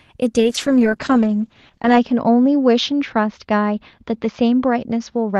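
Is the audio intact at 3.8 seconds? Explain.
No. A call bitrate drop runs from 0.39 s to the end, which fits Opus falling from about 32 to 8 kbps. Coarser coding and a top cut from 12 kHz to 8 kHz leave the speech rough and muffled.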